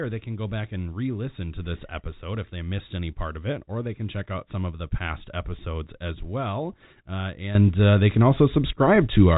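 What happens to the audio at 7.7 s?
At 7.7 s the speech is already louder than before: at 7.55 s the level jumps by about 12 dB in a single step and stays there until the clip ends at 9.38 s. The background noise rises with the speech, and the step may carry a click. This is a sudden gain jump, likely a digital gain setting or bit shift applied from one sample to the next with no ramp. The narrow telephone band, with nothing above about 3.8 kHz, carries through unchanged.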